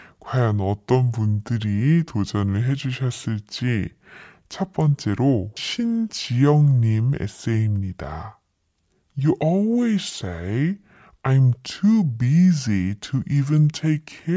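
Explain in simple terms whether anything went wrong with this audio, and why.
Something went wrong for the whole clip: a wrong sample rate. The audio was played back at two-thirds the speed it was recorded at, which fits a 24 kHz recording played as 16 kHz. As a result, the speech drags slowly and sounds deep, about seven semitones lower.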